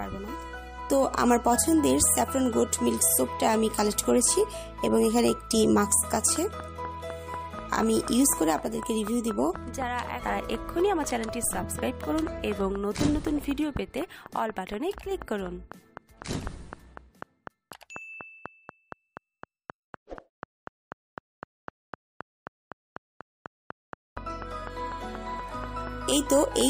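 From 6.12 s to 26.62 s a train of clicks runs under the sound: sharp, near-identical ticks at a steady 4.05 per second, around a hundred in all, peaking roughly 10 dB above the programme and audible in the pauses as well. The likely cause is an external pulse source, such as interference or a faulty connection or power supply. The regular spacing and repeated shape set it apart from random crackle or one-off dropouts.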